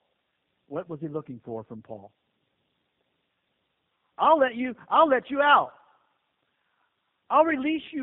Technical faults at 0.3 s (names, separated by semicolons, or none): tandem speech coding